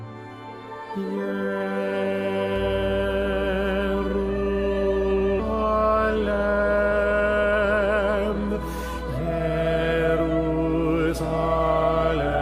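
From 2.56 s to the end, a steady low tone sits under the audio, strong at roughly 10 dB below the signal. This is mains hum at 60 Hz, power-line energy leaking in through a ground loop or from a nearby transformer. At 5.39 s the audio jumps forward with no gap in between. This is a skip ahead where about a second of sound is simply missing, dropped in transit or by an overflowing jitter buffer while later audio was already queued. From 5.65 to 8.13 s the sound runs hurried, about 11% fast, with its pitch unchanged. This is a jitter buffer speed-up: holding more audio than its target, the receiver trimmed short pitch-period pieces again and again, roughly 300 ms in total, to bring the delay back down.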